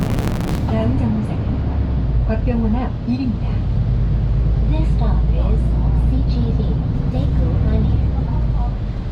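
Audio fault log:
0.00–0.59 s, block size mismatch (truncated): The opening sound carries a steady buzz at 138 Hz and plays back 1.6 times too fast while staying near its normal pitch. One stage is producing blocks longer than the next stage consumes, so the tail of every block is discarded. The buzz is the rate at which those cuts repeat, which fits a 512-sample write block. The playback runs fast because only part of each block survives.
5.38–8.53 s, call bitrate drop: The sound turns coarse and watery when the encoder's bitrate falls from 48 kbps to 18 kbps, following a drop in the call's bandwidth estimate. It holds at the lowest rate for about 3.08 s. With fewer bits available, the codec quantises the signal much more roughly, and that produces the grainy, smeared texture. The sound clears again once the bitrate recovers at 8.53 s.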